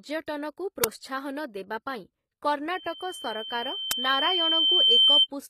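It's a speech clip, and the treble throughout sounds gritty and lispy on the s sounds, with harmonics not quite lining up up top, likely from HE-AAC compression at a low bitrate around 20 kbps. At 0.84 s and again at 3.91 s there's a loud, roughly 6 ms crack: an uninitialised buffer, where garbage memory got played out, which fits a 256-sample block. From 2.75 s to 5.27 s you get a loudspeaker feedback squeal at 3.1 kHz, swelling over a couple of seconds to around 15 dB above the speech as the mic picks up its own speaker.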